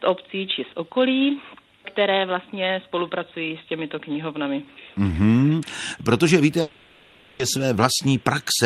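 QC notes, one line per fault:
6.61–7.41 s, long network dropout: for about 0.8 s the sound smears into a synthetic buzz and hiss that carries on the last moment before the break and fades without ever reaching true silence. The audio then resumes mid-flow, with that stretch simply gone. This is most likely a run of lost packets on the call path. The receiver's concealment filled the whole 780 ms gap by extrapolating the last sound until new data arrived.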